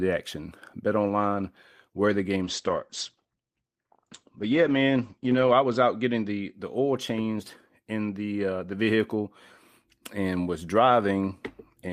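Speech that turns muffled and rough from 2.43 to 6.59 s, with the top end cut to 8 kHz for about 3.1 s. This is a call bitrate drop: the encoder likely fell from around 32 kbps to about 11 kbps, coding more coarsely and narrowing bandwidth.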